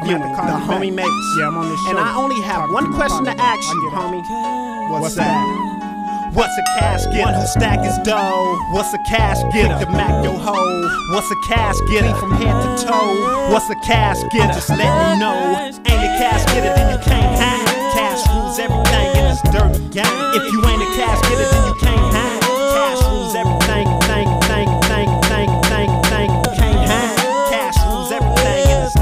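From 23.86 s to 26.45 s the audio falls into a broken-record loop: a 405 ms fragment plays six times back to back, each repeat identical, so the sound stutters in a fixed rhythm for roughly two and a half seconds before normal playback resumes. The likely cause is a stall in the player, encoder or stream that kept re-sending its last buffered piece, and whatever should have played during that span is missing.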